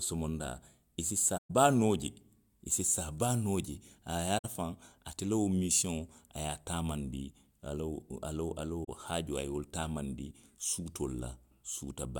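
Around 1.37 to 1.50 s, 4.38 to 4.45 s and 8.84 to 8.89 s the speech drops into silence, the result of AAC frame loss with muting. The gaps of 128, 64 and 43 ms fit runs of six, three and two frames of about 21 ms each. The decoder zeroed the missing spectra, so the overlapping windows fade the sound out and back in. The holes have soft edges, which sets them apart from a hard sample dropout.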